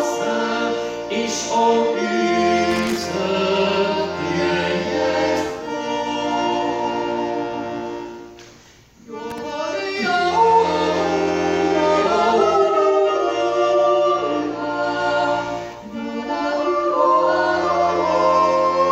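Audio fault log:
2.71–3.06 s and 9.30–9.38 s, loose connector crackle: a worn or dirty contact in the signal path shifts and repeatedly makes and breaks, chopping the audio on and off, with any DC on the line adding pops. The result is an irregular burst of scratchy crackle, the first about 0.35 s long and the second briefer.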